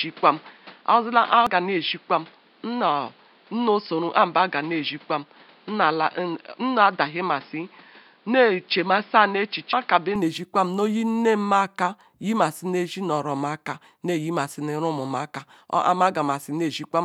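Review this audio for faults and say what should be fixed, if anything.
From the start to 10.16 s the speech sounds dull and boxy, with nothing above 5.2 kHz and a noise floor roughly 30 dB below the speech, then opens up with no gap or level jump. That is likely an input switched to a poorer device, such as a headset's call profile, for the first ten seconds. Locking the recording to one fixed input device, and disabling automatic device or profile switching, would prevent this.

At 1.47 s and 9.73 s the speech jumps ahead, losing about 400 ms and about 700 ms of audio. This is compressed frames skipped. The jump sizes point to missing or rejected frames of roughly 93 ms each. Writing the file reliably, and checking its integrity before decoding, would prevent damaged or missing frames.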